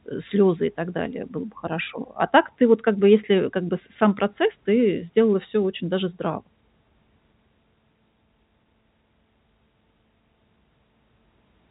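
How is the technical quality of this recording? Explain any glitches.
The technical quality is sound, and there are no glitches to explain.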